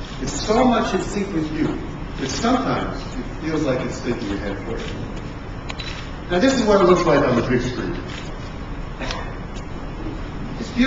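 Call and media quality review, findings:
Drift correction step, 0.85–1.43 s: playback runs about 5.5% fast, pitch up about 93 cents, then snaps back. Likely clock-matching resampler jumping rate in one step to drain its buffer.

Drift correction step, 6.95–8.03 s: opposite shift, about 5.5% slow, pitch down about 98 cents, close to a semitone, before returning. Likely same component refilling its buffer. Speed and pitch move together in both events.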